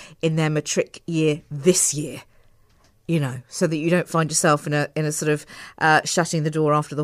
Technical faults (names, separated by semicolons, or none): none